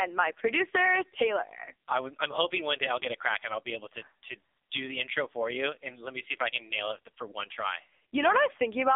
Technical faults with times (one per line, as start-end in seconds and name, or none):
0.00-8.95 AMR narrowband mobile codec